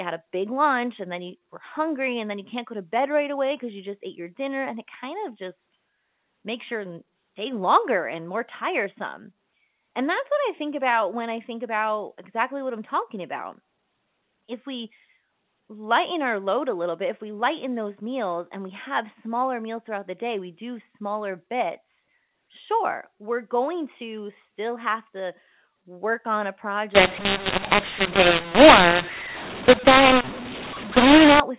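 From 26.95 to 31.4 s, right after "to work on a", the speech turns harsh and grainy with hiss in the gaps. That's mu-law and A-law mixed up: A-law samples decoded as mu-law.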